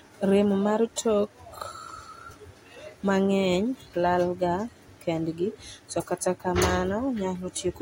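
At 0.96 s there is pre-echo on a sharp attack in the speech. A brief hiss arrives just before the onset and spreads over about 16 ms. The codec coded that stretch as one transform block and spread its quantisation noise across all of it. The noise level was set by the loud attack, so it also filled the quiet gap ahead of it. The onset sounds softened and smeared.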